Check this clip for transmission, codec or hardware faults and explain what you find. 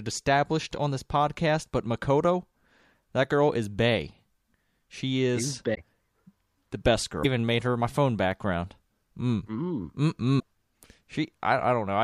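Yes, there's one recurring codec fault in this speech clip: three brief glitches, at 5.74 to 5.78 s, at 7.22 to 7.25 s just before "made her my phone", and at 10.39 to 10.43 s. Each is a short skip forward with a glitch lasting 30 to 44 ms, about one to two MP3 frames at roughly 26 ms each. That's likely a broken MP3 bit reservoir. Frames went missing, so the next frame reached back for borrowed data, pulled in bytes from the wrong frame, and decoded them wrongly until the stream caught up.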